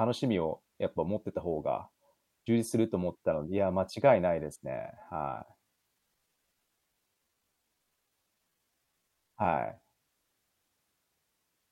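From 4.78 s to 9.96 s there's a time-stretched section: the speech suddenly drags to about 0.74 times its normal pace while the pitch stays put. Most likely software padded that stretch to fill a length by repeating short slices.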